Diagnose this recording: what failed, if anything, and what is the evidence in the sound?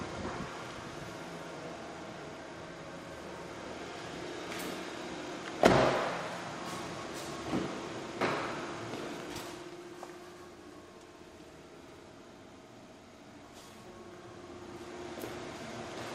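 Crude rate conversion in the sample-format stage, present throughout: an inharmonic, gritty fizz, only roughly 25 dB below the signal, follows loud and high-pitched sound. Its fixed pattern fits a 44.1 kHz to 48 kHz change by repeating samples, not codec smearing or clipping.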